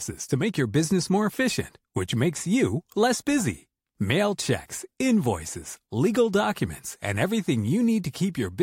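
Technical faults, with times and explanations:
Nothing wrong turns up anywhere in this bit of speech, so there's nothing to list here.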